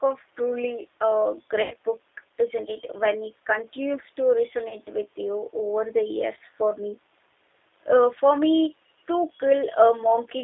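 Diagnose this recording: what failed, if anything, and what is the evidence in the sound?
G.729 codec, across the whole clip, at the codec stage. The speech is confined to roughly 300 Hz to 3.6 kHz, with nothing above, and carries the plainly audible roughness and synthetic edge of a low-rate model-based coder, which points to 8 kbit/s G.729A. The coder does not keep the waveform. It resynthesises each 10 ms frame from a vocal-tract filter, a pitch predictor and a few pulses, and that sparse excitation is what sounds coarse.

VoIP packet loss concealed by the speech codec, at the network stage, from 1.62 to 1.76 s and again from 4.69 to 4.77 s. The first gap covers about 90 ms of missing audio, which fits nine lost 10 ms frames, and the second covers about 20 ms. In each gap the decoder carried its last pitch and filter forward at falling gain, so the sound stretches out and fades. Recovery lags briefly after packets resume.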